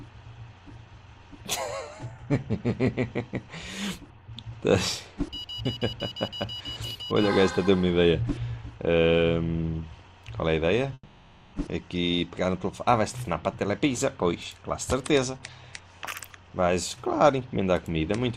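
From 10.93 to 11.56 s, a long network dropout likely stopped audio from arriving for about 600 ms. The receiver stretches the last sound into a fading buzz across 600 ms and then gives 30 ms of silence, and the sound resumes with that 600 ms missing.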